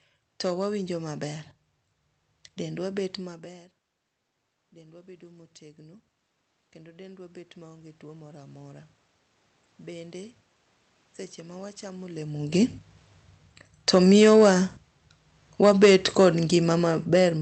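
A stage in the chain is driven past its limit for the whole clip, by about 6 dB, so hard clipping flattens the tops of the loudest peaks. Only a small fraction of the waveform hits that ceiling, which puts the damage on the speech peaks: brief crackle on those peaks, with extra harmonics pushed high into the spectrum. The call path itself caps the band near 8 kHz.

From 4.72 s to 12.78 s the automatic gain control is rising. The input had dropped by about 19 dB, in step with the talker moving away from the microphone around 3 s, and the control answers by winding its gain up by about 13 dB over those eight seconds. Voice and room noise swell together slowly, so the background grows along with the speech rather than staying put.

Automatic gain falling follows at 13.72 s to 14.41 s. After the talker comes back closer around 12 s, the raised gain is now too high, and the control backs off by about 3 dB in under a second. 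The voice arrives loud and then settles downward with its background.

A second automatic gain fall runs from 15.52 s to the end. The control is again reducing gain, and the sound and room noise sink together through the final seconds.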